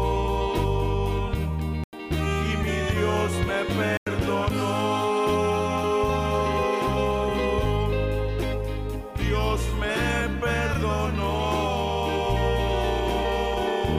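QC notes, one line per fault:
1.84 to 1.93 s and 3.83 to 4.07 s, corrupt frame muted: the audio drops abruptly to silence, for about 90 ms, then about 240 ms. The decoder likely rejected damaged compressed frames, roughly two and five of them, and the player filled the gaps with silence without losing timing.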